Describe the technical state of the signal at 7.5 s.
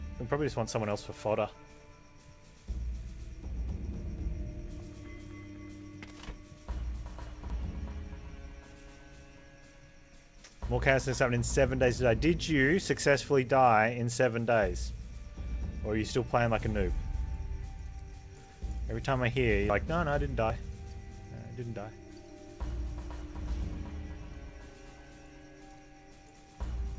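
At 7.5 s the audio skips abruptly ahead by roughly 70 ms, most likely a dropped buffer (overrun) where unread samples were overwritten and the two sides spliced. The waveform shows a discontinuity with no gap, and the spectrogram a thin vertical line up to the call path's 7 kHz ceiling.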